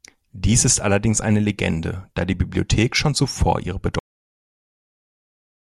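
At 3.99 s, right after "schon zuvor ihre", the speech stops dead. This is a cut-off end. The final stretch of audio was never written out or played back, so the recording ends partway through a sound. There is no natural decay or fade. The level drops straight to digital silence. That silence fills the last 1.75 s of the clip. The abrupt stop makes the utterance feel severed rather than finished.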